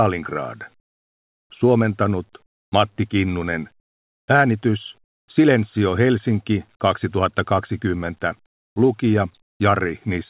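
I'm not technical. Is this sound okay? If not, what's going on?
No. The call system likely stopped sending audio during brief pauses, and the receiving end filled each gap with made-up hiss. This is called comfort noise in place of the background. You hear the real room sound swapped for a flat, much quieter hiss at 2.46 to 2.72, 3.80 to 4.28, 5.04 to 5.28 and 9.42 to 9.60 seconds. The background seems to drop out briefly, then snap back when the sound resumes.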